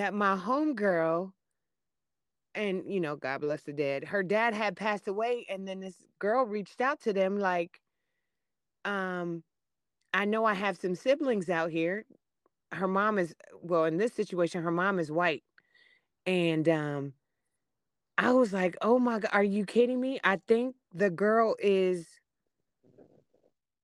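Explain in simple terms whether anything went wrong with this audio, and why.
Listening through this speech recording, nothing stood out as having gone wrong with the sound at any point.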